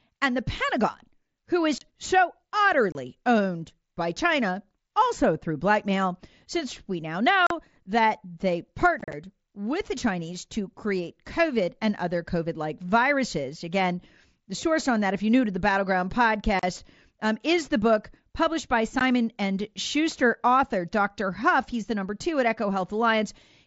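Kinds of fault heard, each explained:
Unconcealed Bluetooth headset packet loss: the speech breaks into short holes of 15 to 38 ms with abrupt edges, and a rougher, chopped stretch near 9.0 s, because mSBC voice packets between headset and phone were lost and nothing filled the gaps.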